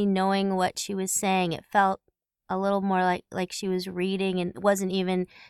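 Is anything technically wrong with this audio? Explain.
No, nothing is technically wrong with this audio.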